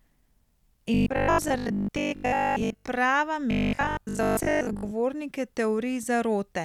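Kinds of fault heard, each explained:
Robotic sound from repeated short buffers: the speech turns into a stiff metallic 50 Hz buzz, likely a 20 ms chunk looping while most fresh audio gets skipped.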